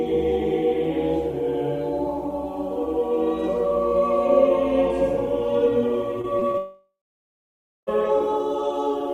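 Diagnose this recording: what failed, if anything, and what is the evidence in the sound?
Network stage, short concealed packet loss: brief smears in the music at 6.21, 6.39 and 6.51 s, each about 20 ms of audio lost and patched by extending the preceding sound before blending back. Unlike a dropout, the music resumes within hundredths of a second.

Network stage, long network dropout: from 6.58 s the last sound is stretched into a fading buzz or hiss for roughly a third of a second, then about 0.94 s of silence, with music returning at 7.89 s minus about 1.3 s, likely lost in transit. Unlike brief concealment, the gap is long enough to go silent.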